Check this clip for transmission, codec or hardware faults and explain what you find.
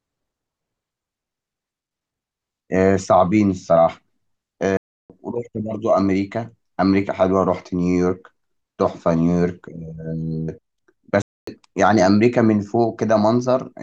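Two playback stalls interrupt the speech, from 4.77 to 5.10 s and from 11.22 to 11.47 s. The player likely ran short of buffered data or had its output thread blocked, so the speech drops to silence mid-flow for about 0.33 s and 0.25 s before resuming.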